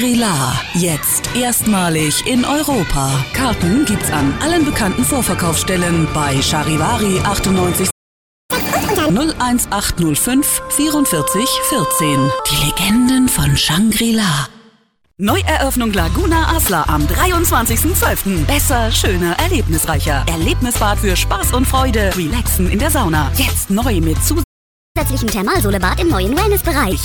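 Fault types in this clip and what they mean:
Playback stall: the output goes silent mid-flow, likely because the player ran short of buffered data or its thread was held up. Here it happens twice, a gap of about 0.59 s at 7.9 s and about 0.51 s at 24.43 s.
Catch-up at higher speed: after each stall the backlog is played faster through resampling, so speed and pitch rise together. At 8.51 s it runs at 2x, roughly ten semitones up, until 9.1 s; from 24.97 s to 26.93 s it runs at 1.25x, about four semitones up.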